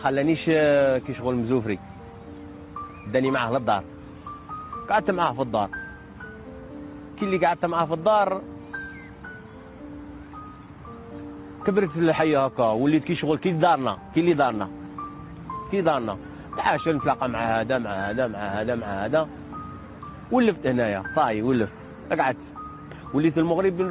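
There are no technical faults to describe in time order; the audio arrives over the call path as expected, with nothing above 4 kHz.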